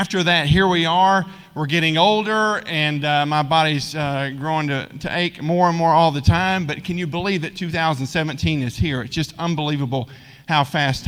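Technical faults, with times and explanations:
No technical faults detected.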